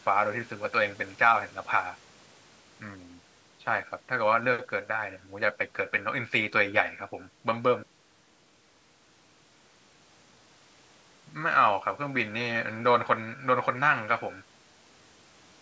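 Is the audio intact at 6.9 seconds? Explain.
Yes, the speech at 6.9 seconds is intact, with nothing there beyond the normal call microphone processing that removes the lowest bass and leaves nothing above 8 kHz.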